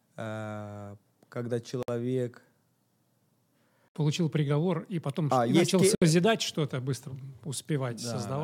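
At 1.83 s the speech drops out for about 56 ms, then at 3.88 s and 5.95 s for about 67 ms each, a gap at a join of encoded pieces recurring every 2.0 s. Each stretch was encoded separately and butted together untrimmed, so the encoder's start-up delay and final-frame padding remain as silence. The dropouts have smeared edges, and the speech resumes exactly where it stopped.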